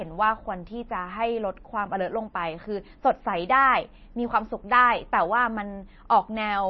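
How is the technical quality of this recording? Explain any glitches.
Quality is poor throughout. Heavy MP3 compression, likely at a low bitrate around 25 kbps, starves the encoder of bits: nothing survives above 5.9 kHz, and flickering weak bands leave the speech watery, swirly and dull.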